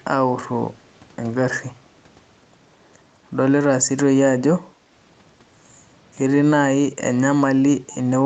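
From 4.71 to 4.91 s, the background is gated by the echo canceller. The room sound ducks by about 16 dB for roughly a fifth of a second. Packet loss would cut everything abruptly, but here only the room sound dips.

Between 7.89 and 7.97 s, a faint delayed copy of the speech arrives 217 ms late, far below the speech. This is likely an echo leak. It is a distinct repeat rather than a diffuse reverberant tail.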